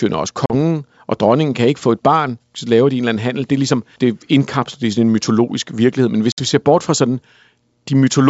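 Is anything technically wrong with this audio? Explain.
Yes. There is packet loss on an ADPCM call, at 0.46 to 0.51 s before "og dronningen kan ikke" and at 6.32 to 6.41 s before "vi ser bort fra". About 40 ms and 60 ms drop to abrupt silence. The decoder's predictor and step size lose sync, so the speech returns slightly wrong before settling.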